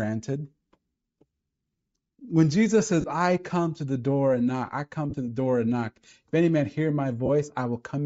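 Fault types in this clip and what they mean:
Bluetooth LC3 compression: The whole clip has a breathy, grainy edge on the speech, with the top end sounding thin and noise-filled. That's likely LC3 at a low rate, consistent with roughly 32 kbps and 10 ms frames, where upper bands get zeroed and filled with noise.
Lost LE Audio frames: There are three short dropouts, each about 30 ms, at 3.01, 5.10 and 7.26 s. The last two fall just after "and knock I come" and "any man hear". The decoder patches each gap with a noisy smear of the previous sound, consistent with about three lost 10 ms frames.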